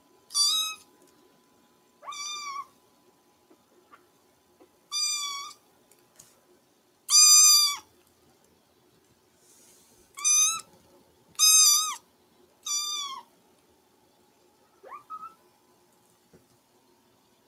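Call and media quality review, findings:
Noise suppressor misclassifying wanted sound as noise; sound cut by the noise suppressor at 0.0–2.03, 2.66–4.85, 5.55–7.05, 7.83–11.38, 11.99–12.65 and 13.23–17.47 s. Gain pulled down up to about 12 dB for roughly 0.4–1.5 s per stretch, sinking sustained parts and truncating decays.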